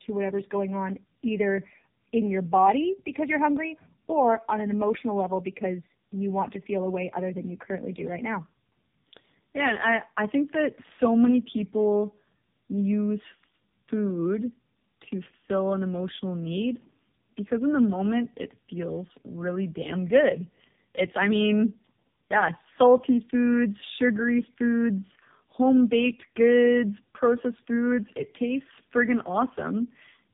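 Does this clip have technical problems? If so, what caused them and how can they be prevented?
Yes. Throughout the speech there is tandem speech coding. The audio sounds like it went through two low-rate AMR-NB stages in a row, which fits roughly 7.4 kbit/s followed by 6.7 kbit/s, joined by a G.711 A-law link between them. At each hand-off the signal was decoded and re-encoded, so the second coder had to model the first coder's errors as if they were speech. That stacking produces the rough, muffled, warbly texture, and nothing is present above 3.7 kHz. To prevent it, use transcoder-free operation or pass the coded frames through unchanged across network borders, so the speech is encoded only once.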